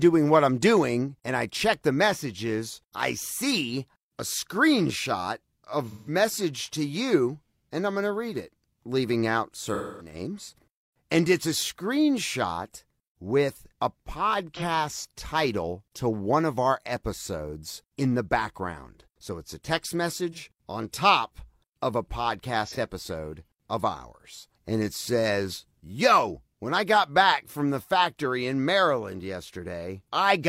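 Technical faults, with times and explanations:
5.85–6.13 s, 9.67–10.14 s, 14.54–14.62 s, 20.32–20.39 s and 22.66–22.77 s, AAC frame loss with concealment: after "I see a screenshot", after "read it leaving out", after "it's a text" and at two unmarked points, the decoder loses data and fills the hole by reusing the last good spectrum. The hole is about 43 ms in the three short cases, about 171 ms in the first and 256 ms in the second, lengths that fit whole AAC frames being lost. Instead of a clean gap, each spot sounds like a brief smeared, noisy or phasey continuation of the sound just before it. That is what separates it from a plain dropout, which would cut to silence.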